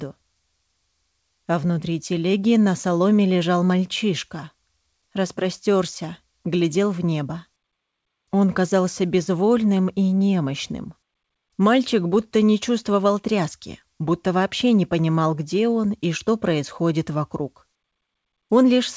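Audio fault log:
No fault in the audio.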